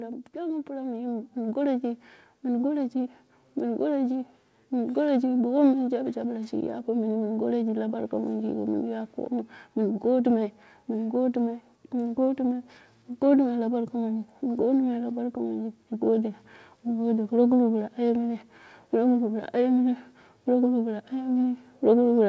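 Automatic gain rising runs from 0.32 s to 21.71 s: the gain control judged the speech input too quiet and kept lifting its gain, by about 13 dB overall, so the voice and background noise swell together, while the sound stays band-limited to 8 kHz by the call path.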